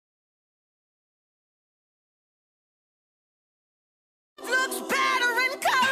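At 2.95 s the sound cuts out and stays out until 4.38 s. The last sound trails into a fading buzz or hiss, then near silence. About 1.4 s is missing, and audio resumes mid-stream. This is a long network dropout, likely from packets lost in transit.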